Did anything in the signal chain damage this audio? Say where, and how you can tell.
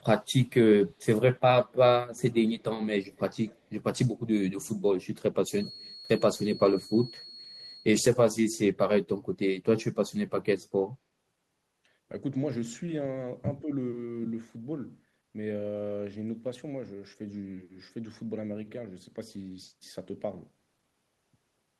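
Yes, all at the call-processing stage. Echo leak: a faint copy delayed 138 ms, about 30 to 35 dB down, at 2.1, 2.6, 3.2, 3.5 and 5.6 s. It is likely an echo canceller letting the far side back through, and its fixed delay separates it from room reverb.

Feedback whistle: a steady 4.3 kHz tone about 20 dB below the speech runs from 5.5 to 7.9 s. Its slow swelling and fading without growth points to a loop likely held just short of howling.

Speech suppressed in double talk: at 13.6 s the speech dips about 10 dB for roughly 100 ms. This is likely the canceller turning down both sides of overlapping speech, unlike a network dropout, which is silence.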